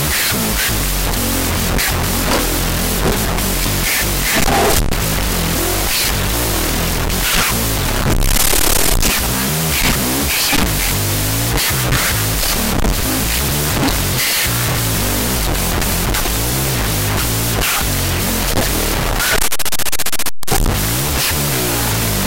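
Speech sits under loud broadband noise throughout, the sign of a wrong sample width: 16-bit data read as unsigned 8-bit, so it plays at half speed, an octave low. The waveform is dense hash, and the spectrogram shows noise across all bands over faint, lowered speech harmonics.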